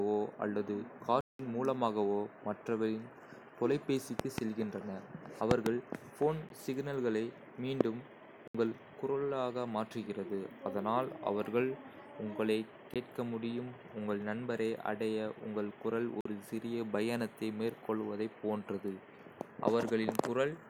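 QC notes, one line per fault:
1.21–1.39, 6.49, 8.48–8.55, 12.94, 16.21–16.25 s: block of digital silence. The speech drops to silence for about 14 to 186 ms, then returns abruptly. The longest hole fits an 8192-sample buffer, and the 46 ms one fits a 2048-sample buffer, both left unfilled in time.
4.20–4.40, 5.51–5.69, 7.81–7.83, 20.09–20.11 s: loud pop. Sharp voltage spikes land on top of the speech, which continues underneath. The first two events are double pops, and the last two are single. They peak about 20 to 25 dB above the signal, likely from a plug, switch, static discharge or driver glitch.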